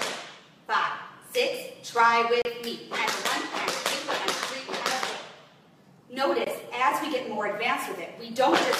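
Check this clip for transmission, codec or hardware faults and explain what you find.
Two hard-edged silent holes, at 2.42 to 2.45 s and 6.44 to 6.47 s: a gap between stream segments, where timestamps leave 32 ms and 21 ms unfilled at 4-second segment boundaries.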